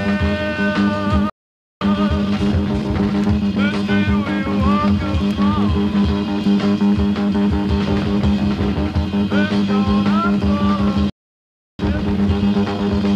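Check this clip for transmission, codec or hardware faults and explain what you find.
Two kinds of fault occur, each twice: playback stalls, each followed by time-compressed catch-up.

Playback stall: the audio cuts to silence from 1.30 to 1.81 s (about 0.51 s) and again from 11.10 to 11.79 s (about 0.69 s). The likely cause is a player that ran out of data or had a blocked thread.

Time-compressed catch-up: after each gap the sound is hurried but keeps its pitch. It runs at 1.25 times speed from 1.81 to 3.85 s and at 1.5 times from 11.79 to 13.07 s. The player trims and cross-fades small pieces to clear its backlog.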